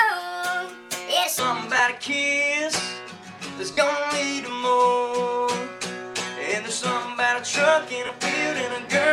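The first 1.39 s run fast, about 1.45 times speed, so the pitch sits roughly seven semitones high and hurried, likely a section played against the wrong clock. After that there are three short lost LE Audio frames dropouts, at 1.77 s for about 20 ms, at 3.73 s for about 40 ms, and at 8.06 s for about 30 ms, where the LC3 decoder fills the gap with a recycled, noisy smear of the previous spectrum. Underneath it all there's a faint trace of light lossy compression.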